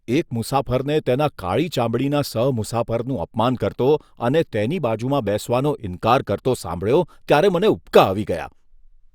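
The speech recording shows no technical faults at any point: the signal stays continuous throughout.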